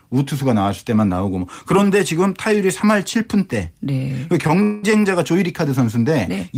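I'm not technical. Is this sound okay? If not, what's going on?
No. There are two hiccups close together, both a little after the four-second mark.

At about 4.47 to 4.51 s there is a short stall from a late packet. One small piece of the call arrived late. The receiving end had nothing new to play. So it stretched the last bit of sound by about 19 ms, then carried on from the same spot. Nothing is lost. A sound just hangs on a moment too long, with a slight buzz or dip.

At about 4.63 to 4.85 s there is a call audio freeze. The speech stops moving forward for about 0.2 seconds. In its place you hear the last sound dragged out as a fading buzz or hiss. It never drops to full silence. This is likely from pieces of the call being held up on the way. When they arrive, the speech picks up where it stopped. No speech is missing. A pause has simply been pushed into it.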